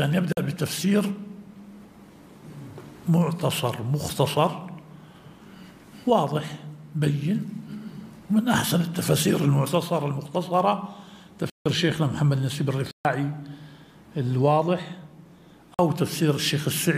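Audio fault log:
0.33 to 0.37 s, 11.50 to 11.66 s, 12.91 to 13.05 s, 15.74 to 15.79 s: block of digital silence. The sound drops to silence and returns with no fade. The two 46 ms holes fit an unfilled 2048-sample buffer. The 140 ms and 158 ms gaps are heard as short holes rather than ticks. Unlike a fade-out dropout or a concealed loss, nothing is smoothed or filled.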